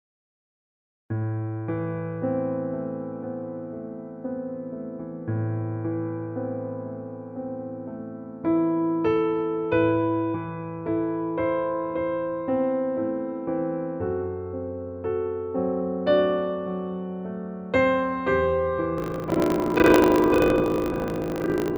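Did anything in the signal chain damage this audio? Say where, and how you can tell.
Yes. From 18.96 s to the end, a 25 Hz rattle points to buffer tearing at the driver or buffer stage: about half of each period repeats audio roughly 70 ms old, leaving evenly spaced vertical seams on the spectrogram.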